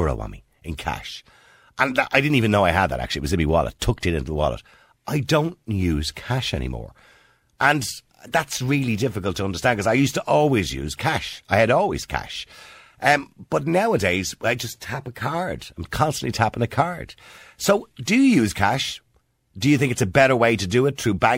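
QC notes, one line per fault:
No fault found in this speech clip.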